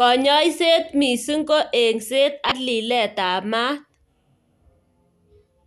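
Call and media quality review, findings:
Damaged data in a compressed stream, 2.48–2.52 s. Brief chirp, squawk, click or short hole in the speech. Probable component: the encoded stream or file. Corrupted bytes made the decoder misread those frames and lose sync, then resume at the next valid frame header.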